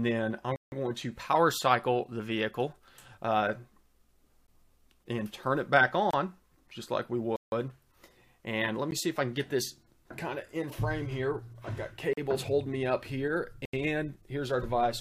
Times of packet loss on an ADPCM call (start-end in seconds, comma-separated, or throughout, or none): none